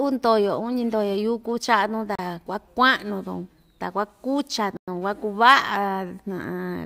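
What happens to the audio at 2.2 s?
A Bluetooth stall, likely interference holding back packets until the buffer emptied, silences the speech for 35 ms from 2.15 to 2.19 s before playback resumes.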